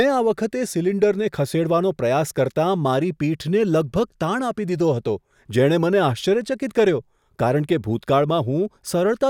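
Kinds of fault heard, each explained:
No technical fault can be heard anywhere in this speech recording. There is nothing to list or explain for it.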